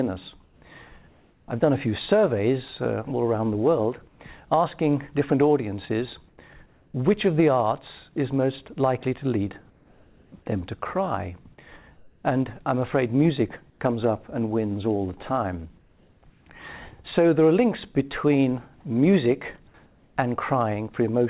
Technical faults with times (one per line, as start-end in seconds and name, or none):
0.44-1.48 comfort noise in place of the background
1.46-1.48 onset clipped by the voice detector
4.08-4.20 comfort noise in place of the background
6.28-6.94 comfort noise in place of the background
9.70-16.46 comfort noise in place of the background
19.86-20.16 comfort noise in place of the background